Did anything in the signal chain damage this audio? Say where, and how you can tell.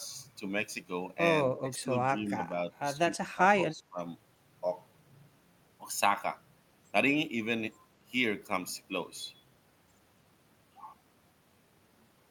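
Yes. In the call-processing stage, the speech is pulled down in short bursts at 1.45–2.12 s, 2.28–2.41 s, 3.34–3.41 s and 3.69–3.99 s. The first two dips are shallow, a few decibels. The later ones go deeper, around 15 dB at 3.34 s. This pattern is likely speech suppressed in double talk: the echo canceller, unable to tell the near talker from loudspeaker echo while both sides spoke, attenuated the near-end signal along with the echo.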